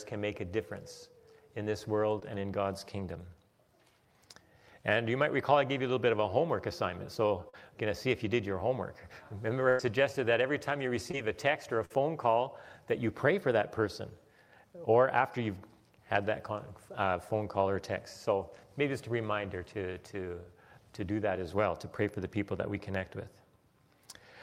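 Short concealed packet loss shows up at 2.19–2.23 s, 7.49–7.55 s and 11.11–11.15 s: brief gaps the decoder papered over by extending the preceding sound, heard as a quick smear or wobble. A burst of packet loss at 9.69–9.81 s drops about 100 ms, and another at 11.85–11.92 s drops about 40 ms; each becomes a fading held tone or hiss before the audio jumps ahead.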